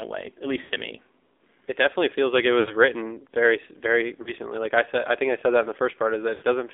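Throughout, the speech sounds thin, boxed-in and noticeably buzzy, confined to roughly 300 Hz to 3.6 kHz. That is the AMR narrowband mobile codec: the voice is rebuilt from a coarse vocal-tract model at a low rate, which fits the 7.4 kbps mode.

At 0.62 to 0.72 s, after "way at", the sound smears and sags before "to me", and at 2.60 to 2.75 s, after "definitely feels like it", it does the same before "very very". It briefly falters again at 4.22 to 4.33 s, after "very very", and at 6.34 to 6.45 s. These are lost AMR speech frames. Damaged frames were replaced by repeating the last good settings at falling gain. The gaps point to about 80 ms lost each time, except about 40 ms at 4.22 s.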